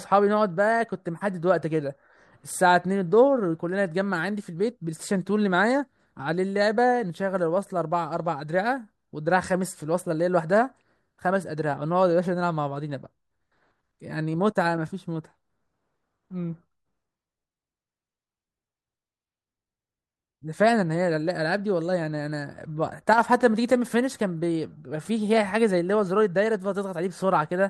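At 23.13 s, running to 23.18 s, there's a quick one-channel drop-out in this speech. For about 50 ms the level falls abruptly by about 6 dB and then snaps straight back, so you hear a brief dip in level rather than silence. The likely cause is one side of a stereo feed cutting out for that moment, which leaves the mono mix carrying only half of the content shared by both channels.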